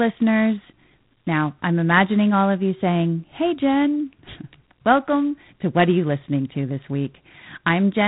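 G.726 ADPCM coding runs through the whole speech clip: a harsh, rasping hiss rides on the speech and rises and falls with its level, which fits 24 kbit/s with too few bits per sample for the adaptive prediction, and nothing passes above 3.9 kHz.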